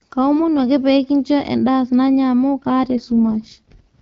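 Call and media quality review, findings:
AMR rate drop from 2.86 s to the end of the speech. The voice turns rough, raspy and synthetic, with the same band and no gap, which fits an AMR-WB rate cut from 12.65 to 6.6 kbit/s. Bits likely shifted to error protection on a weak radio link.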